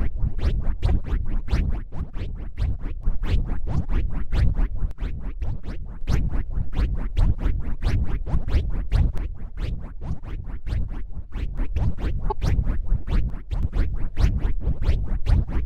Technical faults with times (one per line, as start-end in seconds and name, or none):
0.88-0.90 corrupt frame decoded
1.76-3.03 one channel drops out
4.91-6.01 one channel drops out
9.18-11.58 one channel drops out
12.30-12.32 corrupt frame decoded
13.30-13.63 one channel drops out